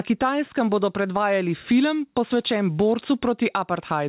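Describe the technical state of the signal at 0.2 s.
At 0.2 s the input gain is likely set far too high for the microphone, so a fast limiter or compressor clamps down on every loud syllable. This gain pumping runs through the whole speech clip, not just this moment: the level swings by around 10 dB, and the dynamics come out squashed. All of this sits within a band that stops at 4 kHz, as expected from the G.711 call path.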